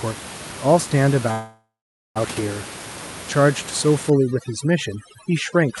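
A short speech recording that came through a call path, with two clear problems. From 1.31 to 2.18 s there's a call audio freeze: the last bit of sound gets stretched into a buzzy tail that fades and then sits in silence for about 480 ms, before the talk picks up exactly where it left off. The 0.84 s hole is inserted rather than cut out, so nothing is lost, but everything afterwards lands that much later. The likely cause is packets stalling in transit until the jitter buffer ran dry. Then from 4.10 s to the end, overdone noise removal kicks in. The room noise, which sits about 13 dB under the speech, gets pushed down and breaks up into twinkly specks, and the voice's quieter parts are gated off along with the noise. The top end stops around 12 kHz, which fits an Opus stream at roughly 64 kbps.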